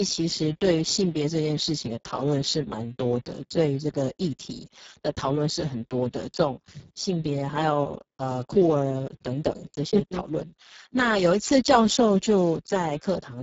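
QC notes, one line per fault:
throughout, Speex codec: the encoder is running at a very low setting, consistent with roughly 6 kbps, which starves the excitation of bits. The speech comes out heavily damaged: hoarse, noisy and edging toward robotic, with nothing above 7.7 kHz.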